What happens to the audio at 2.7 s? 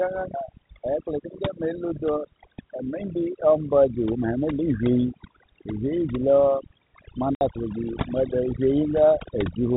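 At 2.7 s the speech carries the overdone noise removal present throughout the clip. Bands near the noise estimate are pulled down hard, taking quiet parts of the voice with them and leaving near-silent gaps with twinkling specks. Unlike the steady 4 kHz telephone band limit, these artefacts flicker.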